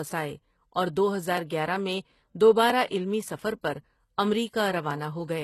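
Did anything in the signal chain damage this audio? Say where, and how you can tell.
Yes. Throughout, the codec damage is plainly audible: the treble ends at 12.3 kHz and sounds rebuilt. This is likely HE-AAC compression, copying lower bands upward, consistent with a 16 kbps stream.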